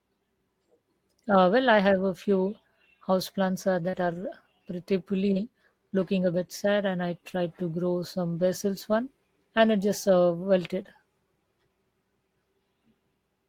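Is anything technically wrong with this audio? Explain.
Yes. Scattered short gaps run from 1.51 to 10.86 s: about four brief dropouts, none longer than roughly 40 ms, where lost or late packets left holes that the receiver patched by extending the preceding sound, heard as small ticks, smears or hiccups in the speech.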